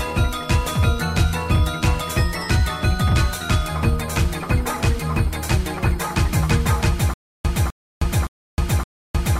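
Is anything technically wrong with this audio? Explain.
Yes. From 7.14 s to the end, there's a stutter with silent gaps. The likely cause is a playback or stream stall: on each retry the player replays its last buffered fragment, then runs dry. So a burst of about 254 ms repeats four times at an even 566 ms period, each separated by about 313 ms of dead digital silence. Whatever should have played after 7.14 s never arrives.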